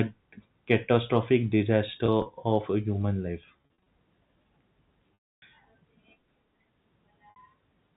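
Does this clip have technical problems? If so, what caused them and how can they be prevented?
Yes: packet loss with pitch repetition at 2.06–2.26 s, 3.58–3.86 s, 5.14–5.42 s and 7.30–7.36 s. Gaps are filled by looping the last pitch period, seen as identical repeating waveform cycles and frozen harmonic bands. The 280 ms loss at 5.14 s fades into silence. Forward error correction or packet redundancy on the network link would prevent it.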